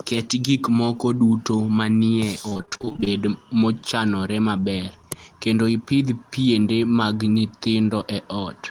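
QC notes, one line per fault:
2.49–3.08 s, repeated packet loss (robotic sound): a dense run of short holes, the longest 26 ms, each patched by extending the preceding sound, so about 290 ms of this stretch, roughly half, is synthetic. That gives a choppy texture. The spectrogram shows repeated smeared, stretched harmonics, and the waveform shows periodic copied cycles.
4.60–4.64 s, short concealed packet loss: about 20 ms of audio failed to arrive, and the gap was filled by continuing the last sound before blending back into the real signal. It is heard as a brief smear or wobble.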